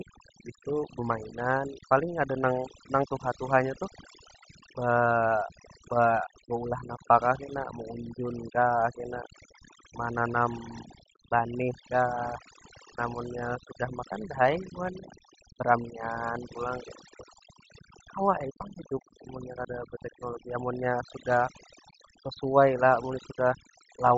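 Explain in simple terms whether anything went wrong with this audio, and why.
Two things went wrong, and both last for the whole recording.

The first is overdone noise removal. A cleanup tool was set far too strong. It silences any sliver of sound that resembles background hiss. Quiet parts of the voice get caught too. So the pauses fall to near silence with twinkling specks.

The second is grainy, breathy roughness on top of the voice, plainly audible from start to finish. This sound most likely comes from Bluetooth LC3 compression, the codec used by newer Bluetooth audio. It chops the sound into slices of 10 milliseconds and, when squeezed hard, throws away much of the high end. It fills that gap with made-up noise. That substitute noise gives the speech its hissy, sandy edge.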